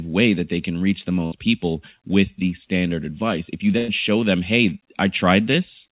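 At 1.26 to 1.34 s, a burst of packet loss left the receiver without about 60 ms of audio after "they can reach the". It concealed the gap by stretching the last sound for about 57 ms as it faded, and the speech then jumps to "people with the standard". A longer burst at 3.78 to 3.90 s hides about 100 ms the same way before "show them". Across the narrowband call path, nothing above 4 kHz comes through.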